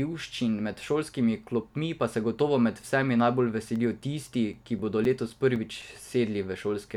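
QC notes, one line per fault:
3.76 to 6.08 s, CD scratch ticks: Just after "gotovo med vsemi najbolj", ten short ticks break into the speech, spaced fairly evenly at about four a second. Each lasts no more than a few milliseconds. A scratch or blemish on the disc ruins more data than error correction can rebuild. It passes under the laser once per turn, so the damage comes back at a steady rate. The player patches or mutes those samples, and each patch is heard as a tick.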